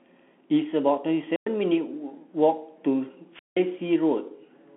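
A speech recording passed through a Bluetooth CVSD headset codec. Nothing above 3.7 kHz survives, and the band sits roughly between 150 Hz and 3.4 kHz. The damage is plainly audible: s sounds turn scratchy and a granular hiss runs underneath, which fits a 64 kbps CVSD link. There are two wireless microphone squelch dropouts. The first runs from 1.32 to 1.47 s, with about 106 ms of near silence. The second runs from 3.32 to 3.58 s, muting for about 175 ms. Each time the radio signal fades, static rises briefly, the receiver's squelch cuts the output, and then the sound returns.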